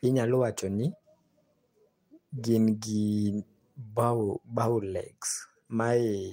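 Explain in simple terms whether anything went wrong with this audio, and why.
Nothing went wrong here: the speech runs without any audible fault, so there is nothing to fix.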